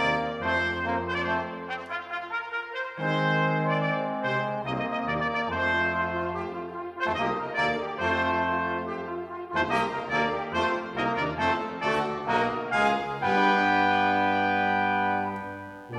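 Mains buzz enters at 12.79 s and continues to the end of the clip. Sharp switching spikes from the 60 Hz power supply have leaked into the signal path, arriving twice per mains cycle. Those spikes carry a dense stack of harmonics of 60 Hz reaching up into several kilohertz. The result is a steady, raspy buzz sitting roughly 35 dB below the main sound.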